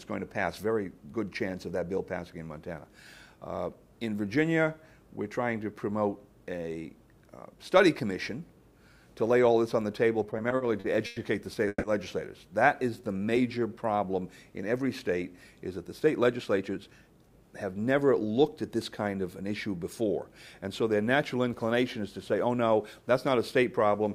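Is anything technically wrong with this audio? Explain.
Yes. Repeated stalls (stutter) from 10.23 to 11.18 s: packets arrived late, the buffer ran empty eight times, and about 230 ms of continued sound makes the audio drag and stutter, with the longest gap 100 ms.

Call audio freeze at 11.68 to 11.85 s: packets were likely held up, so the receiver stretched the last sound for 150 ms, ending in a brief near-silence before the audio resumes.

Jitter buffer slow-down from 12.90 to 13.74 s: repeated pitch periods add 120 ms, so the audio runs at 87% speed with unchanged pitch and drawn-out sounds.

Jitter buffer speed-up from 15.71 to 17.30 s and again from 22.18 to 22.70 s: the receiver trimmed short pieces to cut excess delay, roughly 200 ms and then about 50 ms. The audio runs hurried at 113% and 109% speed without any pitch change.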